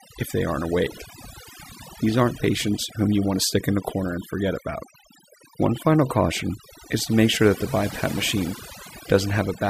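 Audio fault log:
throughout, overdone noise removal: the background drops and breaks up into twinkling specks, and the speech has its softer, quieter parts hollowed out. A noise reduction stage has been pushed too hard: it pulls individual frequency bands down or mutes them whenever their level sits close to what it judges to be noise. Low-level parts of the speech fall inside that zone and are stripped away, leaving isolated bands flickering on and off.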